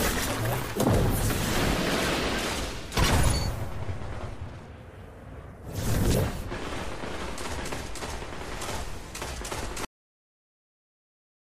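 The audio has a cut-off end. At 9.85 s the sound stops abruptly in the middle of an event. It does not fade or decay. The level drops straight to digital silence, and that silence holds for the last 1.57 s. Nothing in the sound itself explains the stop. The final stretch of audio was never written out or played back, so the last buffers are simply missing.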